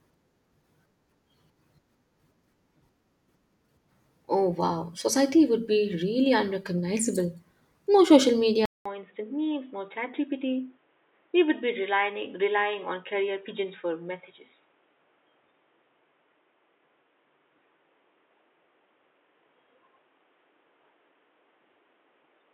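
At 8.66 s the speech drops out for 200 ms and returns boxy, with nothing above 3.8 kHz, slightly quieter, over a new faint noise floor. That gap and changed noise, unlike a plain filter, point to a likely input switched to a poorer device.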